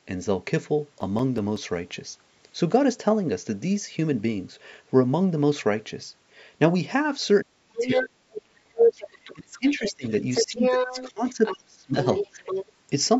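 Speech with CD scratch ticks between 0.82 and 1.75 s: six evenly spaced ticks of a few milliseconds each, about six per second, so a once-per-revolution scratch rather than random clicks. Later the speech dips by as much as about 40 dB from 7.43 to 8.99 s, 9.33 to 10.04 s and 10.43 to 12.39 s, likely speech suppressed in double talk. Unlike a network dropout, each dip coincides with a second voice. That other side's voice leaking through, likely from incomplete echo cancellation, appears at 7.77 to 8.03 s, 8.88 to 9.34 s, 9.68 to 11.57 s and 12.02 to 12.66 s. It is a distinct talker at roughly the main speech level, slightly lower in the last stretch, rather than diffuse room reverberation.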